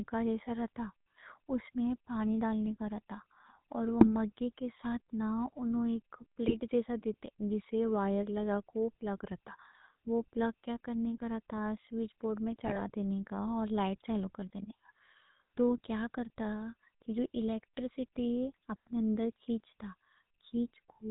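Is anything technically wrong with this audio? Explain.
Yes. The whole clip carries GSM full-rate codec damage. It points to a 13 kbps GSM full-rate coder. The codec models the vocal tract and excites it with sparse, regular pulses. Nothing passes above 4 kHz. The speech sounds buzzy and gravelly throughout.

GSM bit errors strike three times: 4.00 to 4.07 s, 6.46 to 6.60 s, and 12.65 to 12.90 s. Corrupted filter, pitch or gain values reach the decoder. Each burst bends the spectrum into brief squawks, pops and gargling.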